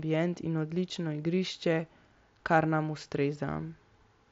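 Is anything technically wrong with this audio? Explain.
No, nothing in this speech clip points to a technical fault. It carries the sound of a Bluetooth mSBC headset link, with speech reaching up to 8 kHz and a light graininess on the louder sounds, as that wideband codec produces.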